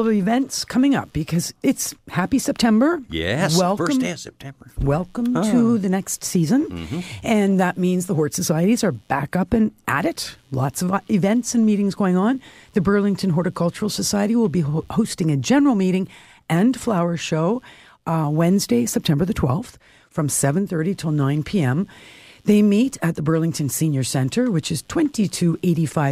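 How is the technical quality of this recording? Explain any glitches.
The speech carries a faint computer activity noise throughout: processor or mouse load disturbs the shared audio ground, producing a quiet buzzing roughly a hundred times a second, well below the voice. A spectrogram would show it as thin, evenly spaced vertical ticks independent of the speech.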